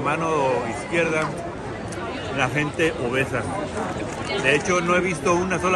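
At 3.99 to 4.02 s a brief chirp-like blip cuts through the sound, the signature of a corrupt frame decoded. Damaged bits in a couple of compressed frames were played back as if valid, so misread gains and codes scattered energy into frequencies that don't belong there. On a spectrogram it shows as a short vertical smear of stray energy; on the waveform, a spiky burst peaking around -25 dBFS.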